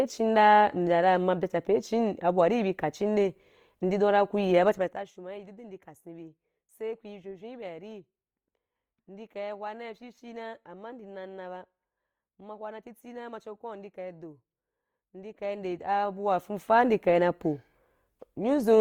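Speech clip, and the whole thing has a grainy, plainly rough texture, with tones turning noisy rather than swirly, even though the full bandwidth is still there. That's most likely Opus compression in its music mode at a low rate, something around 24 kbps. On top of that there's zipper noise on two level moves. From 4.67 to 5.14 s the level drops by about 20 dB in 1 dB steps, and from 15.28 to 16.85 s it comes back up by about 20 dB. Both times a ticking rides on the sound at around fifty steps a second, because the gain jumps in unsmoothed increments.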